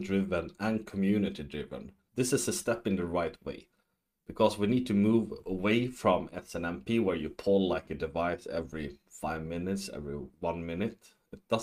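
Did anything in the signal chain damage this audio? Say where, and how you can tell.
No, nothing in the signal chain audibly damaged this audio.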